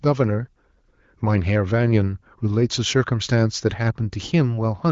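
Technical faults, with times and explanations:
No technical faults can be heard in this speech.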